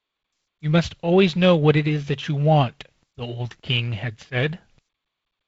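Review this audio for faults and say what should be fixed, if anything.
No faults found; nothing to fix.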